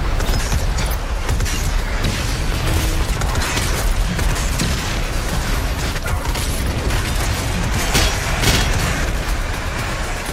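From 2.35 to 3.35 s, a train of clicks runs over the sound. About fifteen sharp, near-identical ticks arrive at a steady 12.2 per second. They poke a few decibels above the signal. Electrical interference from nearby equipment is the likely source.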